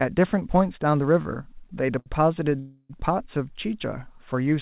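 From 1.22 to 2.08 s the speech stutters through four short stalls, the longest about 73 ms, about 118 ms in all. These are repeated stalls (stutter): the jitter buffer kept running dry, so each gap is a brief stretched repeat of the last sound. Nothing is skipped, and the many small catches, rather than one hold, distinguish it from a freeze.

From 2.59 to 2.91 s comes a single longer hold of about 0.3 s, a call audio freeze. Its likely cause is packets held up in transit until the buffer emptied. The last sound is drawn out as a fading buzz ending in a brief silence, then speech resumes exactly where it stopped. Within the narrowband sound, which has nothing above 4 kHz, it reads as one inserted pause rather than a stutter or lost audio.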